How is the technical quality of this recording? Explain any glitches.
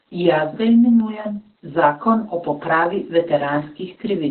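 The technical quality is poor, because heavy Opus voice compression runs through the whole clip.

Opus voice compression, throughout: the speech sounds like it was coded by the linear-prediction voice coder at a very low bitrate, around 8 kbps, with the band narrowed to the narrowband setting. Nothing is left above about 4.3 kHz, so consonants lose their crispness and the speech sounds muffled. The excitation is coded coarsely, which adds a hoarse, slightly robotic texture to the speech.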